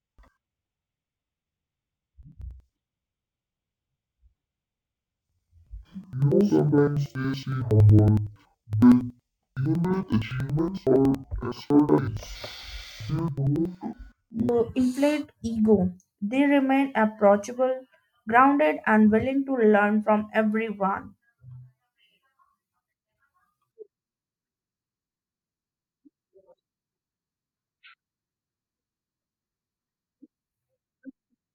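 From 0 to 14.57 s, up to "inflate ego", interleaved audio read as planar: each 93 ms block (consistent with 4096-sample blocks) splits into two half-speed copies. Speech sounds an octave low, doubled and choppy. The spectrogram shows halved harmonic spacing, and vertical seams repeat at 10.8 Hz.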